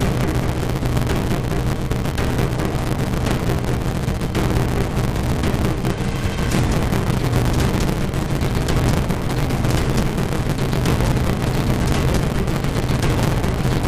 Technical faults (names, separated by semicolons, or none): block size mismatch (truncated)